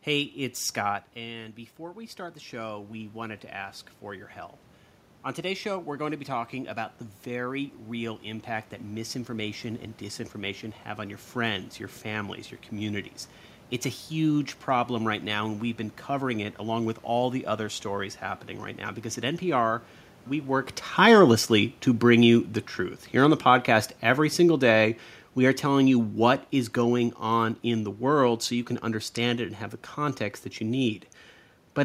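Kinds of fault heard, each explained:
Automatic gain rising: The input dropped by about 11 dB as the talker moved back from the microphone near the start. From 0.36 to 12.37 s the gain control slowly added about 11 dB, so the voice and the room noise swell together.
Automatic gain falling: Just after the talker moved, at around twenty and a half seconds, the level came in too hot. From 20.86 to 28.39 s the gain control eased back by about 8 dB, and the voice sinks gradually along with the room noise behind it.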